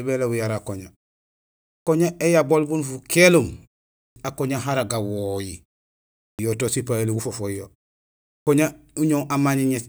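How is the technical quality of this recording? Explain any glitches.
The recording has a recurring glitch: clipped start after a pause, at 1.71 s (before "éyabol bun"), 4.0, 6.24 and 8.31 s. Each time, about 150 to 160 ms of sound is swallowed while the sleeping output wakes after silence, so speech begins abruptly. Unlike muted pauses, actual speech is lost.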